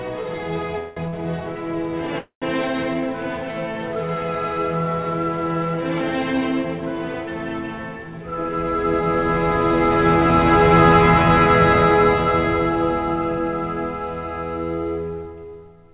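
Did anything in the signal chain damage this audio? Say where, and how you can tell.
Yes. Repeated stalls (stutter) run from 0.54 to 1.15 s. The sound halts four times, with the longest hold about 180 ms, and roughly 41% of that stretch is filler rather than new audio. This happens at the network and jitter-buffer stage. Packets arrived late or slower than playback, so the buffer kept running dry and the receiver stretched the last sound to cover each wait. Nothing drops out; the passage simply drags and hiccups.

A call audio freeze follows at 2.19 to 2.44 s. The last sound carries on for about 0.23 s, decaying into roughly 110 ms of silence, and then the audio resumes exactly where it left off. Playback ends up about 230 ms later than before. The likely cause is packets held up in the network, emptying the jitter buffer until they arrived. The band stopping at 4 kHz fits the G.711 call path itself.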